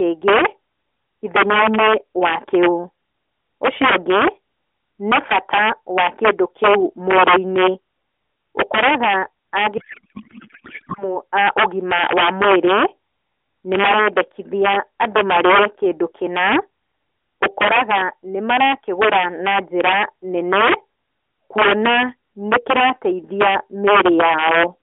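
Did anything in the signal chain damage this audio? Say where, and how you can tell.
Yes. Violent cracks break out on the loudest peaks across the whole clip, far sharper than clipping. That is integer overflow at a sample-format or gain stage: the signal runs about 7 dB past full scale, and the few samples over the limit wrap to the opposite sign instead of being held.

From 9.78 to 11.18 s the speech turns into garbled noise and warble that barely tracks it. This is a codec payload misread in the AMR decoder, which is otherwise passing narrowband 12.2 kbps speech. Octet-aligned frames were parsed as bandwidth-efficient, so every field sits in the wrong bits.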